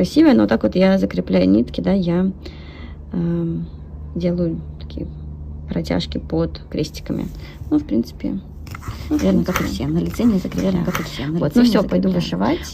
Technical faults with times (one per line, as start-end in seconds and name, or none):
8.92-12.73 doubled audio track